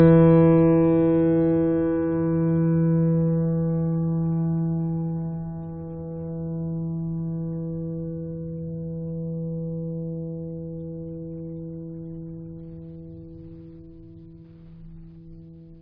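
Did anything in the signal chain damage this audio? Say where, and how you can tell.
No, nothing in the signal chain damaged this music.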